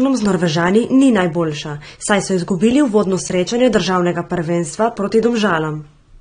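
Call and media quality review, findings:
Dull, smeared speech with fizzy sibilants, no content above 9.7 kHz, throughout. Likely AAC compression, consistent with 32 kbps AAC-LC: coarse quantisation, lowered bandwidth.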